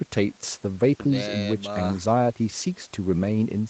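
There are no technical faults in this speech, which carries the ordinary trimmed bass of call microphone processing.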